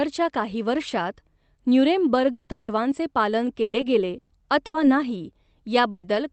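From 2.31 to 4.78 s, packets kept going missing or arriving late, producing repeated packet loss across five gaps. Each hole was covered by stretching the sound just before it, about 650 ms in all, with the longest gap at 170 ms, and some of the audio was partly rebuilt, roughly a fifth of a second. The speech turns choppy and robotic, with about 640 ms missing and around a quarter of that stretch concealed.

At 5.91 to 6.06 s, a burst of packet loss drops about 120 ms in one run. The receiver carries the last sound forward and fades it, so that moment smears into a held buzz or thinning hiss. Speech then picks up further on, with 120 ms gone and no true silence.

At 6.03 and 6.15 s, single lost packets were rebuilt from error correction. The decoder played the lower-quality backup copy sent with the following packet, so nothing drops out, but each 40 ms patch sounds rougher and noisier. 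The Opus call path's 8 kHz top end fits a roughly 32 kbps wideband setting.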